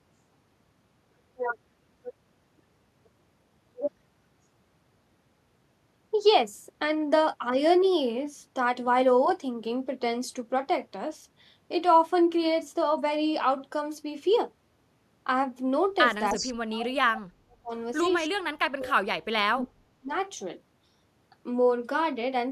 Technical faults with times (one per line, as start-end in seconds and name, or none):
16.29-16.53 echo leak
16.33-17.72 speech suppressed in double talk
18.29-20.11 speech suppressed in double talk